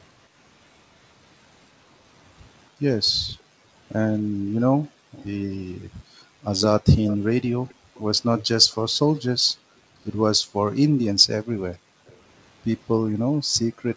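A speech recording from a call. The room background dips out by about 40 dB between 3.12 and 6.42 s (roughly one and a half seconds in total), at 7.75–7.94 s, across 9.44–12.07 s (about a second in all) and at 13.38–13.59 s. This is background gated by the echo canceller, which clamps the microphone while the far-end loudspeaker plays. A delayed copy of the speech, trailing by 282 to 291 ms, appears at 5.12–5.26, 7.06–9.52, 10.74–10.79 and 11.72–12.17 s. It is strongest in the long 7.06–9.52 s stretch and weaker elsewhere. This is likely an echo leak, where the canceller failed to remove all the loudspeaker sound its microphone picked up and sent it back.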